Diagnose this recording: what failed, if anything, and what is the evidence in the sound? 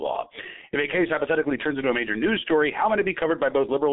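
The failure is at the codec stage: G.723.1 coding throughout. Nothing passes above 3.8 kHz, within a 200 to 3700 Hz telephone band. The speech is muffled and hoarse, with smeared consonants. Its slow 30 ms frame model damages it heavily, which fits a 6.3 kbit/s stream.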